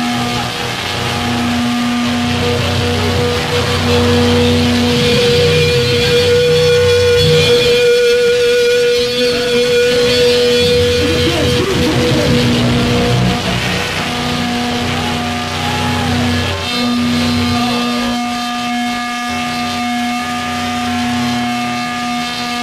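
The signal holds steady throughout, with no dropouts, level jumps or disruptions to be heard at any point.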